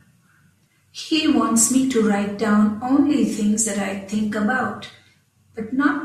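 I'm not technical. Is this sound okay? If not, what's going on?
Yes, nothing in this speech recording points to a technical fault.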